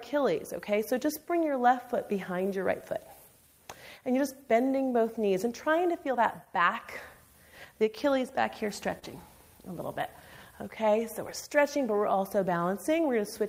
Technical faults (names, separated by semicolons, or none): clock drift between sender and receiver; scattered short gaps; repeated timing corrections